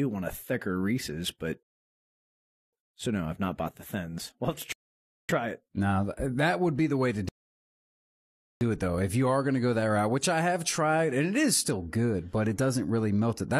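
At 1.63 s the speech drops into silence for about 1.1 s, then picks up again at "so no I've not" with nothing missing. This is a rebuffering stall: the player exhausted its downloaded audio and halted until more data arrived. A shorter stall follows at 4.72 s, lasting about 0.57 s. The longest comes at 7.29 s, right after "be the way to", holding for about 1.32 s before "it though" resumes seamlessly. Each gap adds time without removing any sound.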